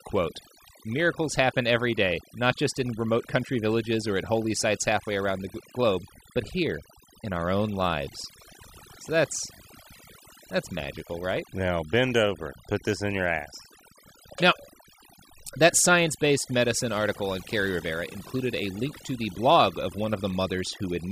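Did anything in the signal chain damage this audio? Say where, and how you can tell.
Yes. Overdone noise removal in the call-processing stage affects the whole speech clip. Between phrases the background falls to near silence dotted with twinkling specks. The suppressor was set too aggressively: any frequency band near its noise estimate is pushed far down or switched off, and quieter parts of the voice go with it. On a spectrogram the gaps show isolated flecks on a dark field, and the voice's upper detail appears as broken, patchy tiles.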